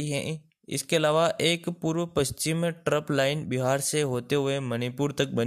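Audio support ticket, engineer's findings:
No fault found in the audio for this ticket.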